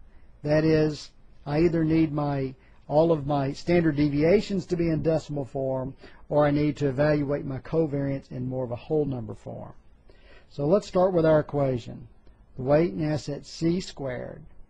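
Nothing stood out on listening to this audio.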